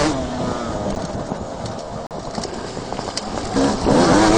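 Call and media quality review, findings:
Block of digital silence at 0.95 s (7.8 ms tick) and 2.07–2.11 s (40 ms hole). Likely output buffer not filled in time. Flat waveform, vertical click streaks at edges.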